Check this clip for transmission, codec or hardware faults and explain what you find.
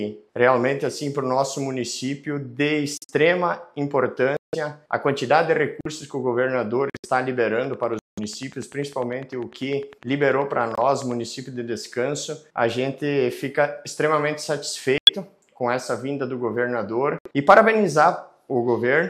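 Two faults can be heard: repeated dropouts from corrupt frames being muted, and a ticking click train in the middle section.

Corrupt frame muted: the sound abruptly cuts to silence at 2.97–3.11 s, 4.37–4.55 s, 5.81–5.87 s, 6.90–7.06 s, 7.99–8.19 s, 10.75–10.81 s, 14.98–15.10 s and 17.19–17.27 s. Each gap lasts between 60 and 200 ms, consistent with whole compressed frames. Bit errors made those frames undecodable, so the player substituted silence for them without shifting the timing.

Train of clicks: from 7.64 to 11.12 s, a steady ticking runs at about 10 clicks per second, roughly forty in all. The clicks reach about the level of the sound itself. They likely come from electrical interference or a struggling interface injecting regular pulses.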